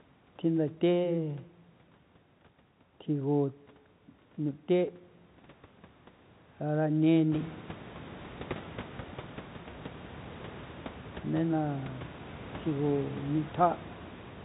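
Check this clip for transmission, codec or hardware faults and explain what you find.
Nothing in this speech recording points to a fault anywhere in the chain. The sound stays within the 4 kHz band of G.711 telephone coding, and the room's own background noise rises by about 20 dB around the middle of the clip, then sits about 15 dB below the speech.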